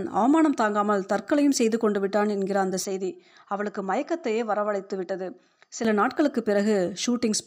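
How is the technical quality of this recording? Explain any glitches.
The recording has one clear fault, in the middle of the speech. From 2.84 to 5.85 s, the input seems switched to a poorer device. The sound suddenly turns duller and boxier, with nothing above 7.6 kHz. It drops a few decibels in level, and a faint new noise floor appears well below the speech. There is no gap at either switch. The likely cause is the system changing to another microphone or a headset profile, which then switches back.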